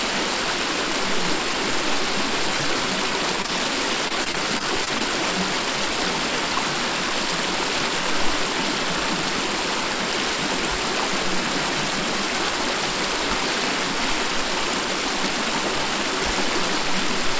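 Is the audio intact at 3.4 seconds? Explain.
No. From 3.42 to 3.50 s there are two back-to-back short concealed packet losses, one at 3.42 to 3.46 s and the next at 3.46 to 3.50 s. Each is about 20 ms of audio that arrived too late for the decoder. The receiver filled each gap by extending the last sound it had and then blended back into the real signal. The result is a brief smear or wobble. The call path's 8 kHz band limit, which fits G.722, sits around it.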